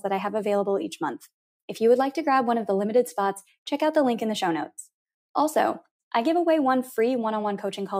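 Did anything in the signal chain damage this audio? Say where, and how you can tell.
No, the signal chain left no audible damage here.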